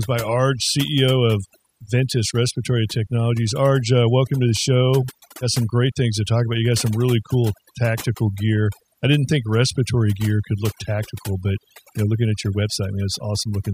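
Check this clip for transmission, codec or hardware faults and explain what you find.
One fault runs through the whole speech clip: overdone noise removal. Overly aggressive noise reduction cuts any band near its noise estimate, leaving near-silent gaps with twinkling specks and taking quiet parts of the voice with it.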